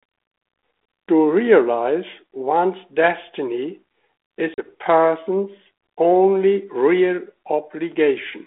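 At 4.54 s the speech drops into a hard-edged silent gap, then returns with brief distortion, settled by 4.71 s. This is packet loss on an ADPCM call: about 40 ms, a couple of packets, went missing, knocking the G.726 decoder's adaptive predictor and step size out of step with the sender's.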